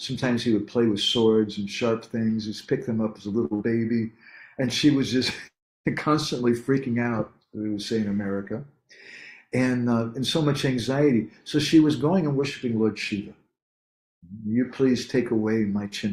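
At 3.45 s a short stall from a late packet holds the sound for about 55 ms, until 3.53 s. A packet missed its playout time, the jitter buffer emptied, and the receiver stretched the last stretch of audio until the packet turned up. Playback then resumes exactly where it stopped, so nothing is lost. Unlike a loss burst, the only change is a brief held smear with a slight buzz or dip that adds about 55 ms of delay.

Almost immediately afterwards, from 3.55 to 3.62 s, comes a burst of packet loss. Consecutive audio failed to arrive in time. The receiver concealed it by extending the previous sound for about 48 ms and letting it fade, producing a held buzz or decaying hiss. Where this differs from the stall is what follows: the audio picks up further along, and about 60 ms of material is simply gone.

From 15.72 s to the end, a jitter buffer speed-up makes the audio run at about 110% of normal pace. 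The buffer had built up more audio than it wanted, so the receiver trimmed out many tiny pitch-period-sized pieces in succession, around 50 ms in total, to catch up. The pitch stays the same, which separates this from a simple playback-rate error, but the final stretch sounds hurried and compressed in time.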